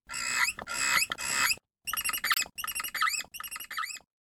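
At 2.31 s the sound jumps ahead and the next 70 ms, to 2.38 s, come out as a brief glitch. This is likely a broken MP3 bit reservoir: after a cut, a few 26.1 ms frames decoded with borrowed bytes from the wrong frame.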